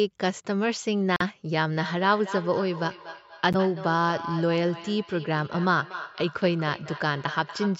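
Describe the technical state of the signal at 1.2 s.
Right around there the speech drops out completely, from about 1.16 to 1.21 s, with roughly 41 ms of dead silence before it carries on. That's most likely a Bluetooth stall: interference delayed packets, the headphones' buffer emptied, and playback simply halted until the resent data arrived, so you hear a clean gap rather than crackle. The band-limited call-microphone character, nothing above 8 kHz, is the same on either side of the gap.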